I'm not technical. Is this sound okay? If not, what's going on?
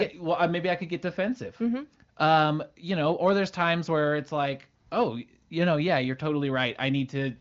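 Yes, nothing stood out on listening to this speech, which sounds like an ordinary HD Voice phone call.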